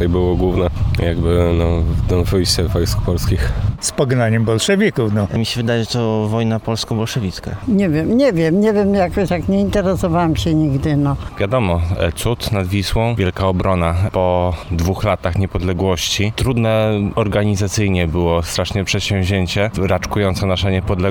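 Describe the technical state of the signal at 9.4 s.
At 9.4 s the signal is intact, with no audible fault at that moment.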